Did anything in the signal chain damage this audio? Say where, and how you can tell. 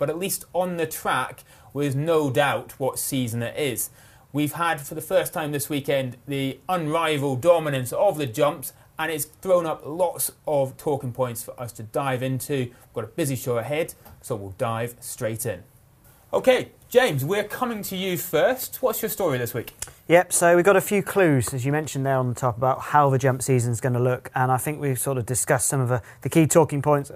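No, I can hear no point in the chain, from capture through to playback, where the signal was damaged.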